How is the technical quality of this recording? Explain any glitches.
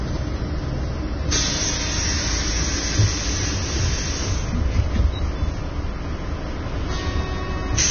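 The technical quality is poor: heavy lossy coding damage runs through the whole recording. The likely cause is low-quality Vorbis compression. At this strength the encoder discards everything above 6.5 kHz and quantises the upper band so coarsely that its fine detail is replaced by noise of similar energy, which fits a bitrate near 19 kbps. The result is a dull top end with a grainy, hissy texture, roughened tones, and smeared, soft attacks.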